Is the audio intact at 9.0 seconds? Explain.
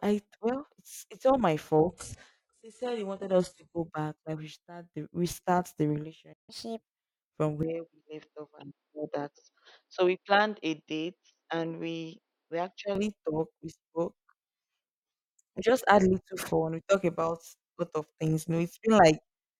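No. From 7.63 to 12.95 s the input likely switched to a poorer device, a narrower capture path. The speech turns dull and boxy, drops a few decibels, and picks up a faint new background noise, with no gap at the switch.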